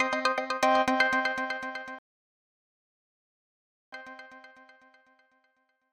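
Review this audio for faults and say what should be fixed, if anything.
A rebuffering stall occurs at 1.99 s: the audio drops to silence and stays there until 3.92 s, then picks up exactly where it stopped. Nothing is skipped or repeated; the gap simply inserts about 1.94 s of dead air into the timeline. This is the player exhausting its downloaded buffer and halting playback until more data arrives. To prevent it, increase the playback buffer's target depth or use adaptive bitrate switching so delivery keeps ahead of consumption.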